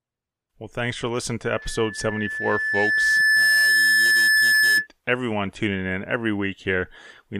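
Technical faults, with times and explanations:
1.53–4.87 s, loudspeaker feedback squeal: a single 1.7 kHz tone swells over about two seconds until it sits about 10 dB above the speech, because the microphone re-amplifies its own loudspeaker output at that frequency. Unlike a steady interference whistle, it grows.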